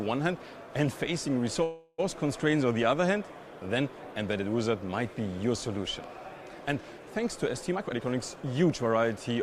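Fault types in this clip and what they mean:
call audio freeze: from about 1.63 to 2.00 s the sound stalls and the last fragment is stretched into a short fading buzz lasting about 350 ms, likely from packets held up in transit emptying the jitter buffer; playback then resumes where it stopped, nothing lost, just delayed.
jitter buffer speed-up: from 7.72 to 9.36 s the receiver trims small pitch-period slices repeatedly to shed excess buffered delay, roughly 300 ms in total, so the audio plays at about 119% speed without a pitch change and sounds hurried.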